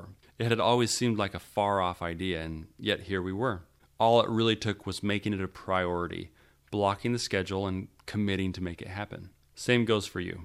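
At 7.17 s, between "a priority blocking the" and "schedule and committing to", a sharp click marks likely dropped samples: roughly one sample lost, so the waveform jumps abruptly.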